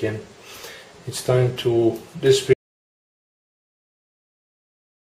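Audio dropout to silence from 2.54 s to the end: the sound cuts off abruptly into silence with no room tone left, likely from a lost input.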